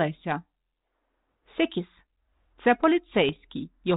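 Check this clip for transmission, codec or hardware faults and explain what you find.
There are bit errors on an ADPCM link, at 1.50 to 1.53 s and 3.28 to 3.36 s. Flipped bits derail the decoder's step size and predictor, so each error rings briefly. Both bursts sound like pops with rough crackle and brief level jumps.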